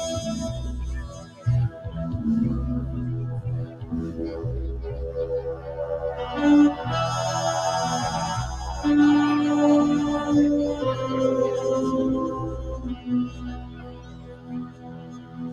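Throughout the clip, a noise suppressor applied to music or sounds, one designed for speech, treats steady tones and ambience as noise. Its gain swings by around 15 dB, so sustained material pumps and thins while sharp attacks pass largely intact.

Sound cut by the noise suppressor occurs at 1.03–1.45 s, 3.66–3.92 s, 5.54–5.71 s, 12.55–13.09 s and 13.26–15.52 s, with drops of about 8 to 10 dB. Held sounds sink and decays are truncated.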